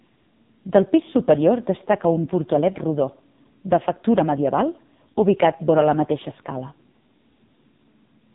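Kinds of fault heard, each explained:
AMR narrowband mobile codec: the speech runs throughout through a low-rate mobile speech coder that rebuilds each 20 ms frame from a vocal-tract model and a few pulses, so everything above 3.8 kHz is gone and the heavy compression, which fits roughly 5.9 kbps, leaves the voice buzzy and synthetic.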